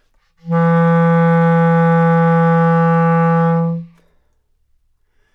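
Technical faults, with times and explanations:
No technical faults detected.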